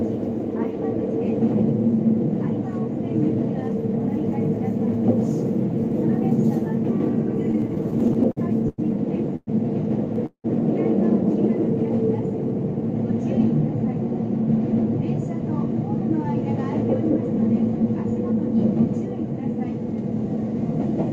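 The audio has three kinds of network timing fault. From 7.51 to 9.49 s there are repeated stalls (stutter). Thirteen short gaps, the longest 111 ms, are bridged by stretching the last sound. At 10.26 to 10.46 s a call audio freeze holds the sound for 180 ms, fading to silence for its second half. Delayed packets are the likely cause. Jitter buffer speed-up follows at 13.67 to 15.04 s and 16.84 to 18.63 s. The receiver trims short pitch-period slices to run 3% and then 5% fast. Pitch stays the same, and the pace sounds rushed in the second stretch.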